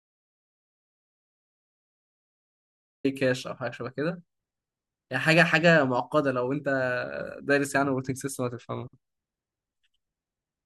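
The clip opens in an audio dropout to silence that runs to 3.05 s. It is silent, with no room tone at all. The speech then begins abruptly, already mid-flow. The input signal was likely lost while recording continued.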